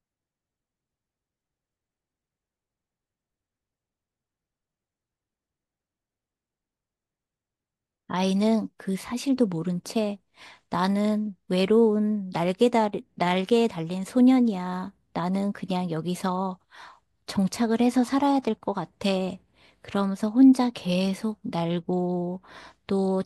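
A careful listen to this recording of speech turns up nothing that stands out as a technical problem.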